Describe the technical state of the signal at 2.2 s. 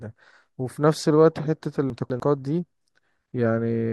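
At 2.2 s the audio is just leaving a chunks-out-of-order fault spanning 1.9 to 2.2 s. One 100 ms chunk plays two chunks late, after the material that should follow it. Nothing is missing, but the sound jumbles briefly. There are three hard joins.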